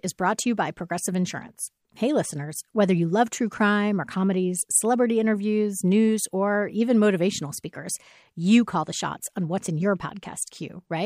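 No technical faults can be heard anywhere in the speech recording, with the signal holding steady and intact throughout.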